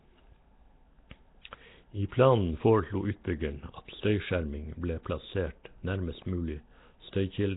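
From start to finish the speech carries a rough, hissy halo and a smeared, underwater blur, with nothing above 3.8 kHz. This is likely Nellymoser compression, the old Flash microphone codec, working at a rate that fits about 16 kbps. Weak bands are starved of bits and refilled with noise. On a spectrogram the energy stops flat at 3.8 kHz, with grainy, speckled noise patches between smeared harmonics instead of clean formant lines.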